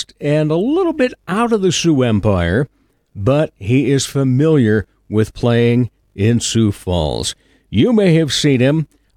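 Speech recording; no technical faults detected anywhere in the clip.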